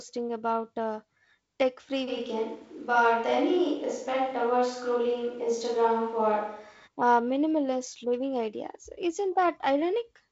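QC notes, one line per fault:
2.10–6.86 s, switch to a distant microphone: between "about uh tech free" and "uh minimalist living ideas", the sound turns abruptly hollow, roomy and thin in bass at a similar level, likely from a farther microphone.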